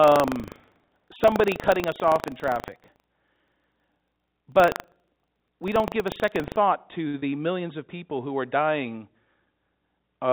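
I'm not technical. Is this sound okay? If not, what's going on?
No. From the start until about 6.58 s there is buffer tearing. The program feeding the sound card and the card reading it have slipped out of step. A small slice of each chunk is old audio, about a tenth of a second stale. That gives a rattly, robotic buzz, about 25 times a second, whenever speech is present.

At 7.08 to 7.16 s there is a short stall from a late packet. A piece of audio arrived late over the network. The receiver stretched the last sound by 55 milliseconds while it waited, so a sound hangs slightly too long. Nothing is lost.

At 7.20 to 7.24 s there is a short concealed packet loss. About 20 milliseconds of speech never arrived. The receiver patched the gap by continuing the previous sound for 24 milliseconds, then blended back. It sounds like a quick smear or wobble.

The whole clip also sounds a bit narrow and phone-like, because the call connection carries nothing above 4 kHz.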